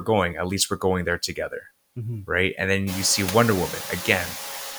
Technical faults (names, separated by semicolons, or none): noise suppressor artifacts; speech cut by the noise suppressor